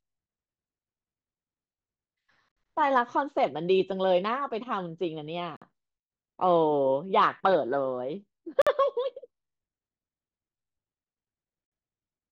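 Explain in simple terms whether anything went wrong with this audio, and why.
Yes, something went wrong: a gap between chunks. The speech was handled in 3-second pieces, and silence was left at each join. You hear four short holes of 50 ms each, at 2.52, 5.57, 8.62 and 11.67 seconds, evenly spaced.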